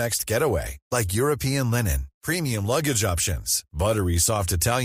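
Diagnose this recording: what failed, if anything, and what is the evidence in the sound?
Nothing in the chain has failed: the speech signal arrives continuous and intact, with no audible disturbance traceable to any stage from capture through to playback.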